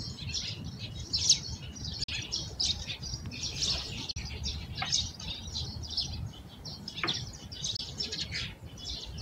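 A recording of sounds with two kinds of fault. Three Bluetooth dropouts cut the sound to silence, at 2.04 to 2.09 s, 4.11 to 4.17 s and 7.76 to 7.79 s. About 43 ms is lost in the first two and about 21 ms in the third. That fits two, two and one missed wireless packets. Each time, the sound comes back further along, as if it had kept playing. Late packets were likely dropped before reaching the headphones. A single loud pop sits at 3.26 to 3.28 s. It peaks a few decibels above the surrounding sound, and the sound continues beneath it. It is likely a brief voltage pulse from a switch, static or a driver glitch, added to the signal.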